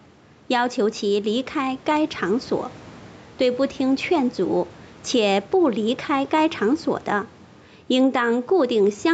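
Throughout, gain set too high likely drives a fast limiter, causing gain pumping: the gain swings about 5 dB, squashing loud and soft parts closer in level.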